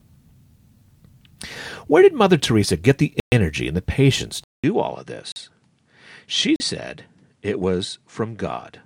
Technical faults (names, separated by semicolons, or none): block of digital silence; input switched to a poorer device